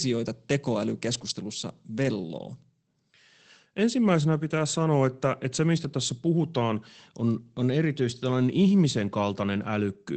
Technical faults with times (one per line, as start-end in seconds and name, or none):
1.13-1.31 lost packet rebuilt from error correction
2.03-2.05 lost packet rebuilt from error correction